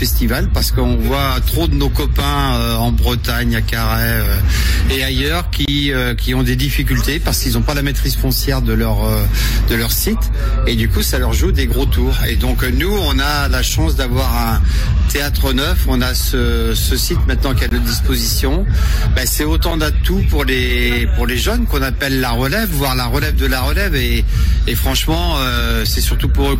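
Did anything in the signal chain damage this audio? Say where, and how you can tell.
Yes. Gaps between stream segments occur at 5.65 to 5.68 s, 13.69 s, 17.69 to 17.71 s and 19.71 s. At the playback stage, the sound drops to silence for about 8 to 24 ms with hard edges on both sides. The breaks are spaced at roughly multiples of two seconds, which fits 2-second segments whose timestamps leave small holes that the player pads with silence. Nothing is missing from the sound itself; the silence is added time between segments.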